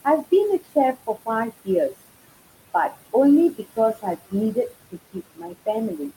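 Noise suppressor artifacts run through the whole speech clip: the suppressor pulls the background down by about 20 dB frame by frame wherever it judges the sound to be steady noise, so the room noise, which sits about 15 dB under the voice, sinks in the gaps and swells back under the speech. Speech cut by the noise suppressor appears from 0.05 to 1.94 s and again from 3.56 to 6.13 s. In these spans the suppressor mistakes parts of the speech for noise and turns them down with the background, by up to about 18 dB in the first span and about 20 dB in the second. Altogether a few hundred milliseconds in the first span and roughly half a second in the second sound swallowed or faint.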